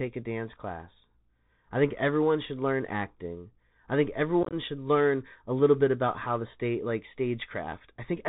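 Throughout, the speech carries Bluetooth CVSD headset codec damage: a hard ceiling at 4 kHz on the spectrogram, granular hiss under the sound, and scratchy sibilants where the one-bit 64 kbps step lags. From 4.43 to 4.54 s, unconcealed Bluetooth headset packet loss drops several packets, about 60 ms lost in runs up to 22.5 ms, showing as abrupt waveform gaps that chop the sound.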